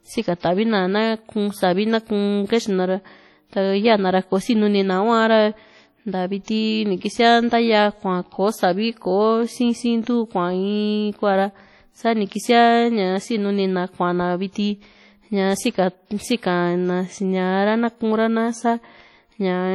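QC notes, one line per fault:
throughout, WMA compression: the speech has a ringing, washy texture, with hiss that swells and fades with the signal and weak detail zeroed out. The heavy damage points to a low bitrate, around 32 kbps, likely from long transform blocks spreading quantisation noise. Unlike steady background hiss, this noise tracks the speech.
0.39 s and 6.44 s, pre-echo: a short hiss, about 39 and 41 ms long, arrives just before sharp attacks, which sound softened. Noise sized for the loud onset is smeared across the quiet start of its block. Unlike reverb or echo, it precedes the attack instead of trailing it.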